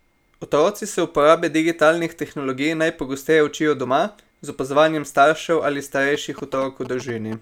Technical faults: GSM signalling bursts

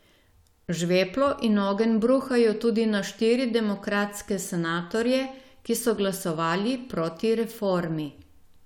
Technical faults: none

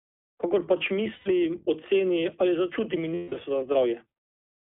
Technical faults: iLBC codec; lost iLBC frames

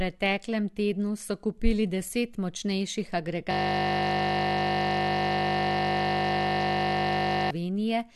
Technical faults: system hang loop

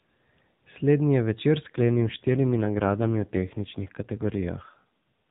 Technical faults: AMR rate drop

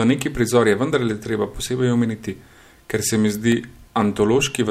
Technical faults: CD scratch ticks

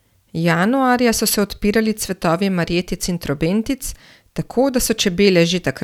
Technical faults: none

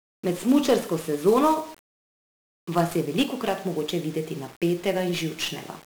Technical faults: 1-bit DFPWM compression

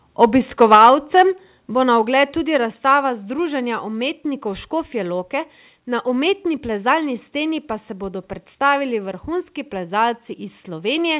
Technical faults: microphone overload; microphone volume stepped down

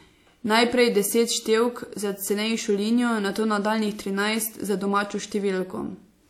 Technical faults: loose connector crackle

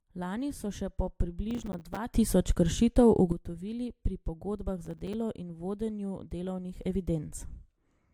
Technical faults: generation loss; processor overload crackle; sudden gain jump

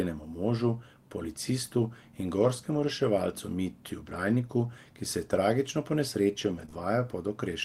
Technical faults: lost packet rebuilt from error correction; short concealed packet loss

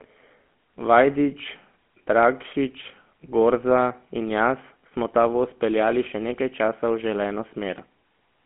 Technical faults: GSM full-rate codec

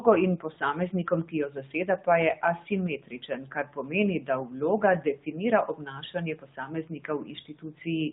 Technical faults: AMR narrowband mobile codec; speech cut by the noise suppressor; lost AMR speech frames

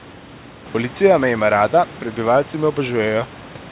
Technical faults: none

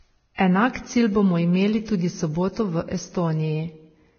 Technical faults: Vorbis compression; pre-echo

